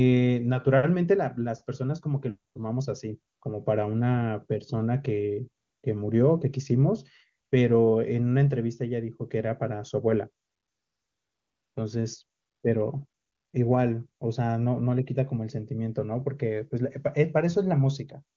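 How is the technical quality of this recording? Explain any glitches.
The speech comes through clean, with the wideband codec at what sounds like its top 23.85 kbit/s mode, but there's one recurring glitch: AMR comfort noise. It kicks in at 2.53–2.55, 3.33–3.41, 5.63–5.83, 7.45–7.51, 10.45–11.75, 12.39–12.63 and 13.07–13.53 s. The phone decided nobody was talking and stopped sending speech, so the far end fills those gaps with a smooth, synthetic hiss that pops in and out, replacing the real background.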